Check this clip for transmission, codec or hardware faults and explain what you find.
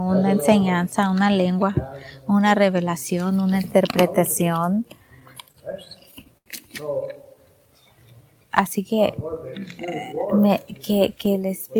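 Two transmission faults are audible, both from network timing at the receiver.

From 4.75 to 6.49 s the audio drags and stutters through thirteen brief stalls, the longest 84 ms. These are repeated stalls (stutter): late packets kept emptying the jitter buffer, and the receiver stretched the last sound to fill about 205 ms, so nothing is lost.

From 10.27 to 10.49 s the sound briefly hurries, running at 116% speed with pitch unchanged. This is a jitter buffer speed-up: with excess audio queued, the receiver trimmed short pitch-period slices, roughly 40 ms in total, to reduce delay.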